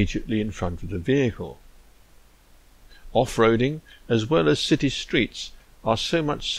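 Nothing goes wrong anywhere in this recording; there are no technical faults to point to at any moment.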